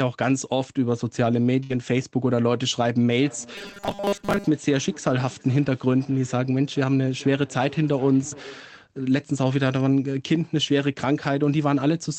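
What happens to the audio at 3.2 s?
At 3.2 s the sound has just entered a stretch of feedback echo between two devices, running from 3.12 to 8.76 s. A second device in the room plays the call back, the first device's microphone picks that up, and neither echo canceller removes sound it didn't play itself. Each phrase returns about every 400 ms, peaking around 21 dB below the speech. Unlike room reverberation, these are distinct, spaced repeats that grow thinner and more ringing.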